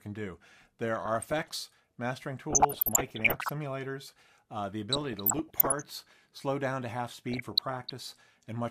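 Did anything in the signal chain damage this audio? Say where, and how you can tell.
Yes. DAB burbling appears in four bursts: 0.94 to 1.54 s, 2.50 to 3.50 s, 4.92 to 5.82 s and 7.29 to 7.91 s. The damage occurred at the broadcast reception and codec stage. Weak reception let a fraction of a percent of bit errors slip past error correction into the MP2 stream. The corrupted samples put short blips of noise into individual sub-bands, and corrupted scale factors make sub-bands jump in level for up to a frame, producing the burbling.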